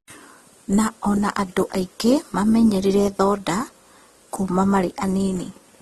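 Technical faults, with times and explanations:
Throughout: transcoding between lossy codecs. The speech has nothing above 12.8 kHz and two overlapping kinds of coding artefacts. The likely cause is a chain of encodes, pointing to a low-rate Opus stage later re-encoded as AAC-LC, each adding its own damage.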